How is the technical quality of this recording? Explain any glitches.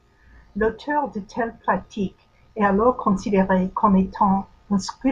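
The recording has no technical glitches to report.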